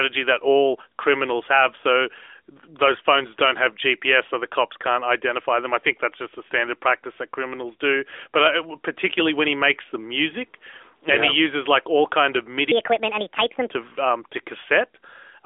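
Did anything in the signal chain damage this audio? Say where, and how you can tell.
Yes. Right after "like all kind of", from 12.72 to 13.71 s, a section at the wrong speed plays 1.55 times fast, raising pitch about seven semitones. It was likely resampled against the wrong clock during editing or playback. A spectrogram shows harmonics and formants jumping upward and compressed in time.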